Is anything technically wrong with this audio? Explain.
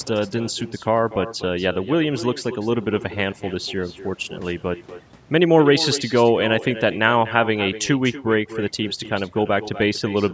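Yes, two faults run through the whole speech clip.

Overdone noise removal: a noise reduction stage was pushed too hard, so individual frequency bands close to its noise estimate are pulled almost to nothing, taking the quieter parts of the voice with them. The gaps fall to near silence sprinkled with twinkling, chirpy specks. Unlike low-bitrate codec damage, the artefacts cluster where the level drops toward the noise floor rather than smearing loud passages.

Echo with no canceller: the far end is on a loudspeaker, its microphone picks the call back up, and nothing removes it. Every phrase is followed, about a fifth of a second later, by a copy sitting about 14 dB lower that sounds thinner. Room reverberation would blend into a smooth tail. Here the copy arrives as a distinct, delayed repeat of what was just said, as if the speaker were heard twice.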